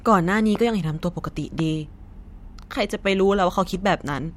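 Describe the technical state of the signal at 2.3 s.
At 2.3 s the signal is intact, with no dropout, distortion, glitch or other fault audible at that point.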